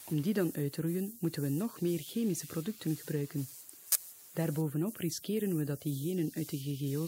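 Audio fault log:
3.90–3.96 s, corrupt frame decoded: a short, fairly loud chirp-like burst of noise lasting about 60 ms. A few consecutive compressed frames had flipped bits and were played anyway, so misread gains and codes put energy at the wrong frequencies for that span.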